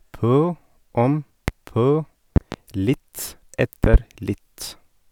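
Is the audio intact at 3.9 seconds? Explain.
No. A loud pop spans 3.84 to 3.98 s, heard as two sharp pops in quick succession that peak about 15 dB above the speech, which carries on underneath. The likely cause is a sudden voltage step or pulse entering the signal path, such as a plug being seated, a switch, static discharge or a driver glitch. The following circuitry shapes each pulse into a short, hard transient.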